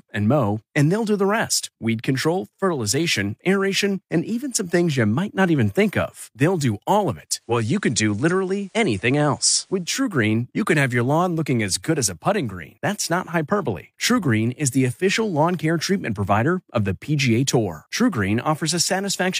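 At 7.25 s the speech shows digital radio blending to analogue: the receiver lost the digital stream and cross-faded over about 0.48 s to the station's FM broadcast, returning at 10.12 s. During that stretch a hiss floor sits roughly 40 dB under the speech and the level shifts by about 1 dB. On a spectrogram, a raised noise band fills the gaps between syllables.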